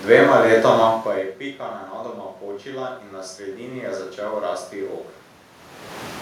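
Automatic gain rising runs from 2.69 to 4.07 s. The input fell by about 17 dB, so the gain control judged it too quiet and slowly lifted its gain by about 4 dB. The voice and room noise swell together across that stretch.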